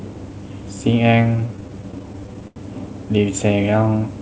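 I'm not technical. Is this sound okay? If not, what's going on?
No. Between 1.37 and 2.59 s the speech drags and stutters, with about fifteen brief hiccups, the longest near 90 ms. These are repeated stalls (stutter): the call's audio arrived late, so playback kept pausing and stretching the last sound.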